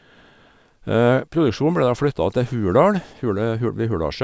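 Aliasing runs through the whole of this speech clip: the sibilants sound gritty and metallic, and the spectrum runs hard up to a sharp edge at 8 kHz. That fits a drop to 16 kHz sampling without an anti-alias filter. Content above the 8 kHz fold reflects back down as unrelated tones, faint at about 35 dB below the speech. Plain band-limiting would just sound dull, whereas here the folded energy adds harshness that was never in the original.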